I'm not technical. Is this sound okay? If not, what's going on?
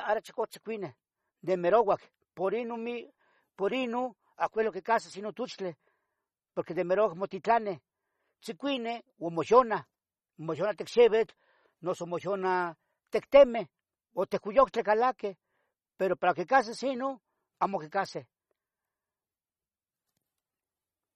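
No. Throughout the speech, the highest treble is missing above 13.1 kHz, with plainly audible damage, likely from heavy MP3 compression discarding detail to save space.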